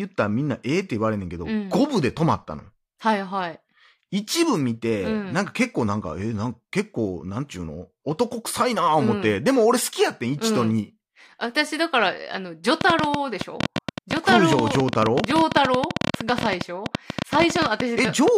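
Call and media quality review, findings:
Train of clicks, 12.81–18.29 s: likely interference or a failing interface injecting pulses, about 13.4 per second at irregular spacing, popping roughly 20 dB above the speech.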